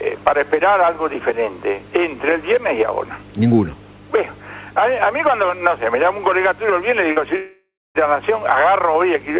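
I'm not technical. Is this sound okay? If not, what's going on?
No. At 7.12 s there is a brief smear or wobble lasting a few hundredths of a second. This is short concealed packet loss: about 40 ms of the call arrived too late, and the receiver covered the gap by stretching the sound just before it.

Just after, from 7.36 to 7.98 s, the sound turns into a fading buzz, goes quiet for roughly a quarter of a second, then resumes with part of it missing. That is most likely a long network dropout, where about 0.6 s of audio never arrived and the receiver could only fill it with fading sound before giving up.

Both happen on a phone-style call line that carries nothing above 4 kHz, which is why the whole clip sounds narrow, like an ordinary phone call.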